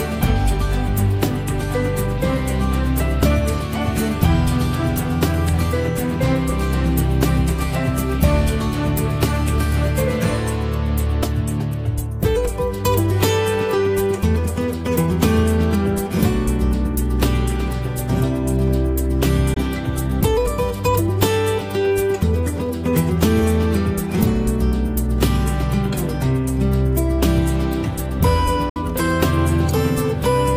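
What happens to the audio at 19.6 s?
Right around that point, from 19.54 to 19.57 s, the audio drops out briefly: about 20 ms of sound is missing. This is most likely a Bluetooth dropout, where a packet failed to reach the headphones in time and was discarded, which fits a single lost packet. What sets it apart from a buffer underrun is that the audio picks up afterward as if it had kept playing, so the missing stretch is skipped rather than delayed.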